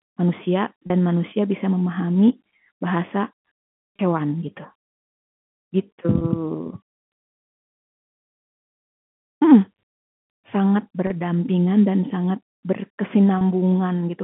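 Packet loss with pitch repetition hits briefly at 0.87, 3.96, 6.18, 11.07 and 13.38 s. Each gap is 30 ms, which fits one dropped packet. The receiver loops the last pitch cycle to cover it, so each one sounds like a short, buzzy held blip.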